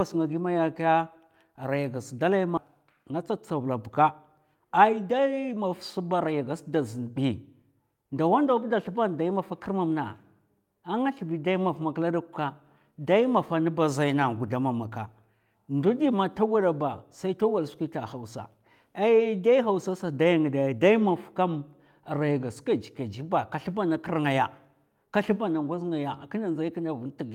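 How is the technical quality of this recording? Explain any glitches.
The recording has two timing glitches early on, one right after the other.

At 2.57 s there is a skip ahead: about a second of speech is simply missing, and playback jumps forward with no silence or filler in the gap. The receiver dropped that stretch while later audio was already queued, so the two sides butt together almost seamlessly. Unlike a dropout or concealed packet loss, there is no pause, buzz or smeared patch, just an abrupt discontinuity in the speech.

From 2.83 s to 6.54 s comes a jitter buffer speed-up. After the jump the buffer held more audio than it aims for, so the receiver trimmed many short pieces, each one or a few pitch periods long, to shed the extra delay. Together they remove roughly a third of a second, and the speech runs at about 108% speed for those few seconds. The pitch stays unchanged, which distinguishes this from a simple fast playback or sample-rate mismatch, where the voice would rise in pitch. 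Here the talking just sounds hurried.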